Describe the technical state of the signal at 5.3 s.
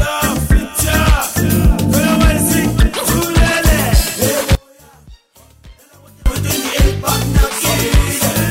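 At 5.3 s the sound has cut out abruptly to a faint leak roughly 30 dB down, an audio dropout to a faint residue spanning 4.55 to 6.26 s, likely signal loss on a live path.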